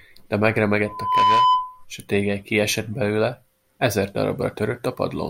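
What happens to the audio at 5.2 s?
At 5.2 s the speech carries on cleanly, with no dropout, click, distortion or other fault at that moment.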